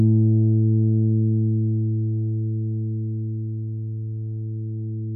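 No technical faults are audible.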